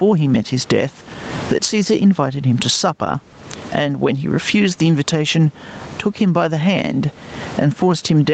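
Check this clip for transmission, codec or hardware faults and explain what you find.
One fault runs through the whole clip: gain pumping. The likely cause is input gain set far too high for the microphone, with a fast limiter or compressor pulling it down whenever the speech gets loud. The level swings by around 25 dB. The speech sounds squashed, with loud and soft passages pressed close together. The top end stops at 8 kHz, which is normal for the Opus call path.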